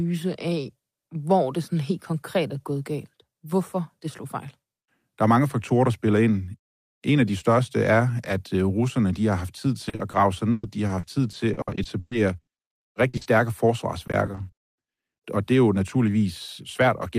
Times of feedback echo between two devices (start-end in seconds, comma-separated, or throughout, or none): none